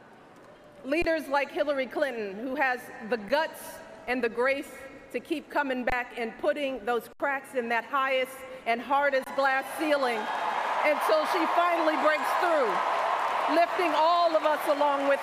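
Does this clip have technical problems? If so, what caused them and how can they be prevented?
Yes: underruns with held sample. The output buffer ran dry and the converter held its last value, so the sound goes flat at 1.02, 3.29, 5.90, 7.13 and 9.24 s. Most gaps last 23 ms, which fits a 1024-sample buffer; 3.29 s lasts 9 ms and 7.13 s lasts 70 ms. In each, about that much audio was skipped. A larger output buffer or a higher-priority audio thread would prevent this.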